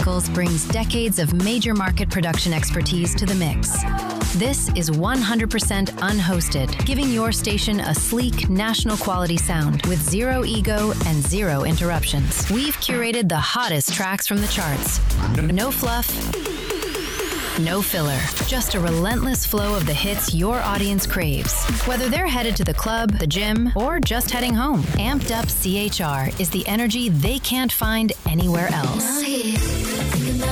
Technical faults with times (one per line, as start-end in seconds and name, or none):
none